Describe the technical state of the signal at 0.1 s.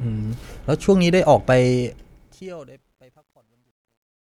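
At 0.1 s the speech signal is intact, with no audible technical fault.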